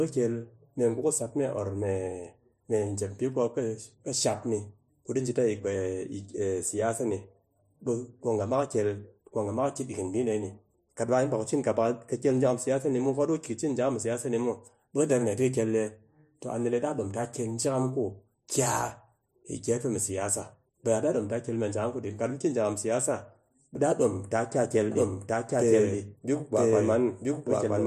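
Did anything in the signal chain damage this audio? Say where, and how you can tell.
Yes: a doubled audio track starts at 24.91 s, just after "kia kel", and runs to the end of the clip. From there a second full-band copy of the speech trails the original by about a second, at roughly the same loudness. It begins abruptly and carries no decay or room colour, so it isn't an acoustic echo. The likely cause is the same signal being captured again through a slower routing path, or an edit that left two offset copies mixed together.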